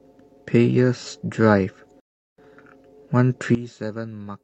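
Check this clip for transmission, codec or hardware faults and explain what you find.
Two faults are audible in this speech clip: a playback stall and an abrupt level change.

Rebuffering stall, 2.0 to 2.38 s: the player exhausted its downloaded audio and halted until more data arrived. The speech drops to silence for about 0.38 s, then picks up exactly where it stopped, so nothing is missing but the clip is stretched by that gap.

Sudden gain jump, from 3.55 s to the end: the speech and the background noise drop together by about 14 dB in a single step, with no fade between the two levels. The likely cause is a digital gain setting or bit shift applied instantly instead of being ramped in.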